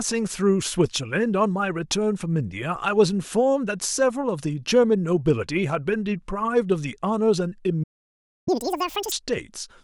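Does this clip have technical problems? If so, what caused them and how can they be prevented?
Yes. A playback stall runs from 7.83 to 8.48 s: the speech cuts off mid-flow and the output goes silent for about 0.63 s before resuming. The likely cause is the player's buffer running dry or its audio thread being blocked, so it had nothing to send to the output until data arrived again. A larger playback buffer and keeping the audio thread free of blocking work would prevent it.

Catch-up at higher speed follows from 8.48 to 9.12 s: once playback resumes, the speech runs at twice normal speed, with its pitch raised by roughly ten semitones, which gives a high, chipmunk-like quality. The player is resampling its backlog to win back the lost time. Once it has caught up, speed and pitch return to normal. Using a small, gradual speed-up, or time-stretching that keeps the pitch unchanged, would prevent the audible jump.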